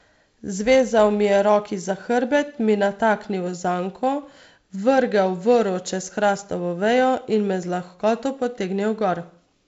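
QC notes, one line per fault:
Nothing to flag here; the speech sounds like ordinary G.722 wideband telephone coding, with a light hiss up top and nothing above about 7.7 kHz.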